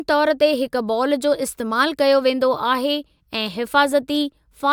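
No technical faults are audible.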